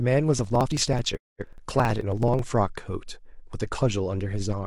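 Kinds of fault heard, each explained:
Periodic USB or driver dropouts: from about 0.39 s to 2.39 s the speech is repeatedly interrupted by regular ticks, repeating every 54 ms, roughly 40 in all. Each time a blocking background task stalls the audio path, roughly 10 ms of signal is skipped rather than filled, so the waveform is spliced with a small discontinuity. On a spectrogram this appears as evenly spaced thin vertical broadband lines, present only where speech energy is.
Digital broadcast dropout: at about 1.15 s the sound fades out over about 20 ms and stays silent until about 1.45 s, with about 213 ms of programme lost, which fits around five lost frames. The receiver muted because good data stopped arriving, and whatever was sent meanwhile is gone rather than delayed. The waveform shows a short taper into a flat line, and the spectrogram shows a clean empty block across all frequencies.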